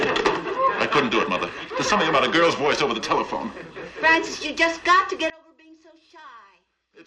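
From 5.3 s to the end, the mono sum drops by about 27 dB to a faint residue, likely from one channel inverted, whose reversed polarity cancels what both channels share. The waveform shrinks to a sliver.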